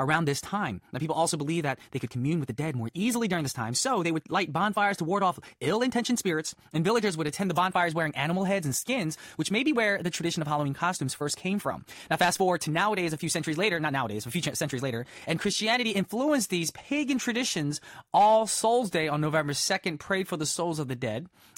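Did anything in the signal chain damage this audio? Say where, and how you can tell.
Yes: a time-stretched section from 0.0 to 16.1 s, likely an editing stage compressing it 1.36x, drops short pieces, so the speech sounds rushed at unchanged pitch.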